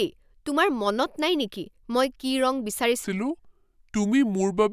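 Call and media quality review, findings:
Wrong sample rate, 3.04 s to end. Speech drops to low, slow delivery: about 0.73x speed, pitch down about 5.5 semitones. Probable component: playback clock or resampler stage. Mechanism: samples clocked out slower than captured, no rate conversion, so speed and pitch fall together by the same ratio. Ratio fits 44.1 kHz audio played at 32 kHz.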